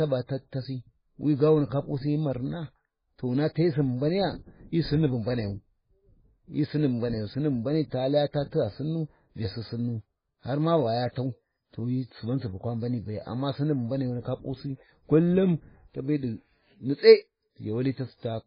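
Heavy MP3 compression, likely at a bitrate fitting around 16 kbps, drops weak frequency lines and removes everything above 5 kHz, leaving the speech watery and swirly throughout. From 10.93 s to the end, a loudspeaker-to-microphone loop, likely held at the edge of feedback, sustains a feedback whistle at 5.1 kHz, about 10 dB below the speech, slowly swelling and fading.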